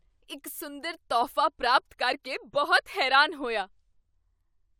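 Nothing here jumps out as a technical problem: the speech runs along without any audible glitch, dropout or odd artefact to point to.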